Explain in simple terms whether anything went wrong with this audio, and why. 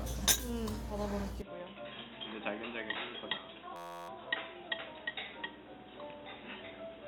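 Input switched to a poorer device, from 1.42 s to the end. The sound suddenly turns dull and boxy, with nothing above about 3.8 kHz, a little quieter, and with faint new background noise. There is no gap at the change. This is likely the recording switching mid-way to a lower-quality microphone or headset input, which can't carry the crisp high end and brings its own tone and noise.

System hang loop, from 3.76 s to 4.09 s. For about a third of a second, one tiny 11.6 ms slice of sound repeats about 28 times, heard as a steady buzz at about 86 Hz. The computer froze briefly while the sound hardware kept replaying the same small piece of memory, which fits a 512-sample buffer.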